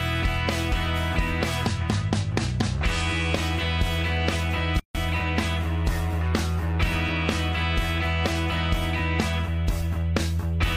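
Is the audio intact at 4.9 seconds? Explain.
No. Between 4.80 and 4.95 s there is a gap at a join of encoded pieces, a gap of about 153 ms with abrupt, slightly smeared edges. Two separately encoded segments were butted together, leaving encoder start delay and final-frame padding in place. Unlike a dropout, the sound resumes exactly where it stopped, and such joins fall every 10 s.

Overlapping this, CD scratch ticks run from 4.34 to 5.90 s: seven ticks, the longest just a few milliseconds, where a blemish exceeded error correction on each disc rotation. Their regular spacing and uneven strength distinguish them from the single solid gap.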